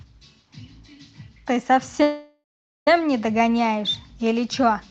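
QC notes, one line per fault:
2.02–2.88 s, call audio freeze: the last sound is held on as a buzzy or hissy tail that fades and then goes quiet for about 0.44 s, before the audio picks up exactly where it broke off. Nothing is lost; instead about 0.84 s of filler has been inserted, so everything after it arrives that much later. The likely cause is packets stalling in transit until the jitter buffer ran dry, leaving the receiver to stretch the final sound until delivery resumed.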